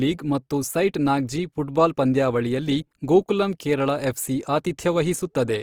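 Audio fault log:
Throughout: Opus compression, plainly audible across the speech, with a noisy, rough, grainy texture where the encoder ran short of bits and filled bands with folded or noise content. It's likely CELT-mode Opus around 24 kbps, still fullband up to about 20.3 kHz.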